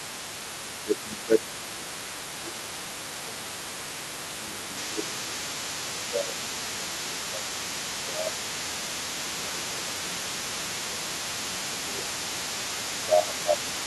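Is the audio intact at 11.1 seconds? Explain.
No, not really. Two things are going on there. First, the other side's voice is leaking through, and it runs through the whole clip at around 20 dB below the talker. It sounds like a faint second voice underneath. The likely cause is the talker's device playing the far end on a loudspeaker, with the echo canceller not scrubbing all of it out of the mic signal.

Second, 11.1 s sits inside a stretch of speech suppressed in double talk, running from 9.15 to 12.13 s, so about three seconds in all. The talker's level sags, by roughly 15 dB at its worst, while the other side is also talking. That's most likely the echo canceller failing to tell the near talker apart from the loudspeaker echo and ducking both together.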